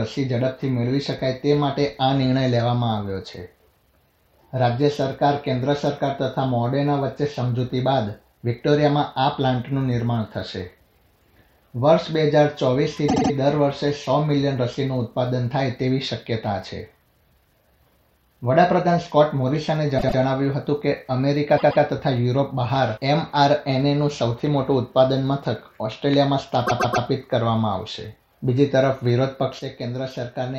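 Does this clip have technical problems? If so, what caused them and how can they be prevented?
Yes. Repeated frames: short blocks replay as stutters at 13.08–13.31 s (78 ms, three extra plays), 19.97–20.18 s (105 ms, twice), 21.57–21.83 s (131 ms, twice) and 26.66–27.05 s (131 ms, three times). A run of compressed frames was written or sent more than once, and each repeat lengthens the audio. Prevent this with sequence-numbered frames and duplicate rejection in the writer or transport.

One channel drops out: from 29.59 s to the end the level falls abruptly by about 6 dB, likely because one stereo channel was lost before the mono sum. Prevent this by checking connections and monitoring both channel levels during capture.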